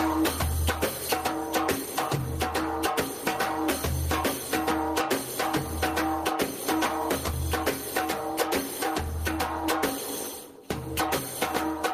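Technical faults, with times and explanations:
Throughout, gain pumping: the input gain is likely set far too high, so a fast limiter keeps clamping down on each loud sound, with the level swinging by around 10 dB. Loud and soft parts end up closer in level, leaving the dynamics squashed.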